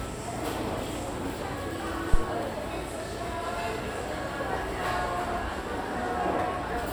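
A phantom power thump arrives at 2.14 s and lasts until about 2.25 s. Switching a supply on a live input sent a sudden DC step into the coupling capacitors, which passed it along as a single low-frequency push before it settled. It sounds like a deep, dull thud with no pitch, peaking at about -8 dBFS, then dying away fast with a decay of roughly 25 ms, so the disturbance is brief.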